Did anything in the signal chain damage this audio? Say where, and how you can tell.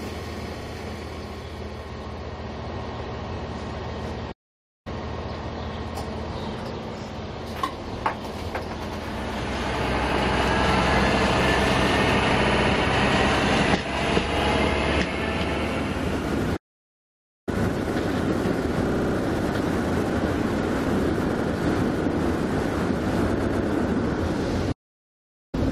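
Yes. Repeated frames at 0.61, 8.88, 12.42, 18.89, 21.36 and 23.39 s: codec blocks of 64 to 128 ms replay as stutters, lengthening the audio without gaps.

Playback stalls at 4.31 to 4.87, 16.56 to 17.49 and 24.72 to 25.55 s: silence, likely a player buffer running dry.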